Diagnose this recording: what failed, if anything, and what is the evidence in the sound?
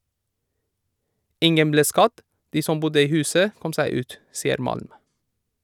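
Nothing failed, and the speech carries no audible evidence of a fault at any stage of the chain.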